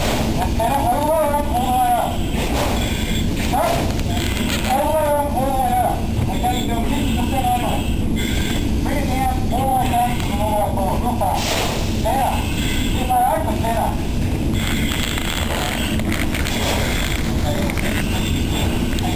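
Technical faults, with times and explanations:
No technical faults can be heard, and the signal stays continuous and stable across the whole clip.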